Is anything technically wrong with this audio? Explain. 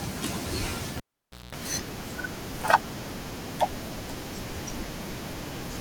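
Yes. A cable pulled and plugged in occurs from 0.97 to 1.55 s: a pop as the live lead disconnects, about 0.53 s of near silence, then roughly 0.2 s of 60 Hz mains buzz while only the plug tip makes contact, and a second pop as the speech returns.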